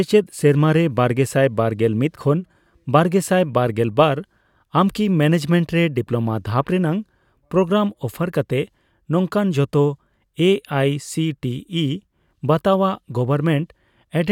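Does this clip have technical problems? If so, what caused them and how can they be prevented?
No, the speech signal holds steady throughout, with no audible dropouts, distortion or other technical defects.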